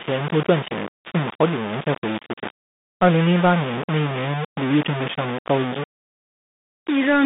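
From start to finish, the speech carries coarse, grainy distortion that shifts with every syllable. Quiet stretches turn gritty. The softest sounds sputter or drop out between steps. The error sits only about 10 dB below the speech, so it is loud. The likely cause is low bit depth without dither. The signal was rounded to very few levels, which fits about 4 bits. The error therefore tracks the sound.

The whole clip also passes through a Bluetooth CVSD headset codec. The band runs only from 150 Hz to 3.7 kHz. The speech sounds thin and boxed, with no low body and no air on top. The codec tracks the waveform one bit at a time, up or down, which fits a 64 kbps stream. Fast, loud high sounds outrun its adaptive step and break up. S sounds turn scratchy, and a granular hiss lies under the speech.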